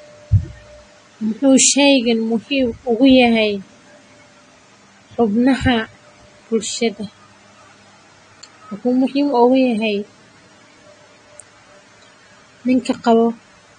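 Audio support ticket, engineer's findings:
AAC compression, throughout the speech. Dull top end, nothing above about 9.7 kHz; warbly, smeared sibilants. Likely an AAC-LC encode at a low bitrate, which fits roughly 32 kbps: encoder dropped its cut-off and coarsely quantised bands, leaving spectral holes.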